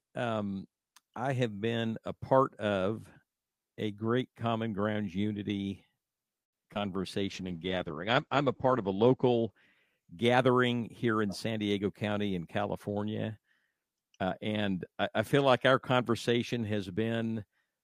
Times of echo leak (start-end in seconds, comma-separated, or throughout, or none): none